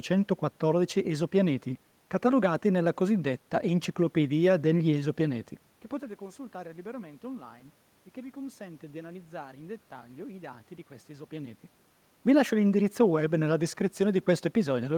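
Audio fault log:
No fault in the audio.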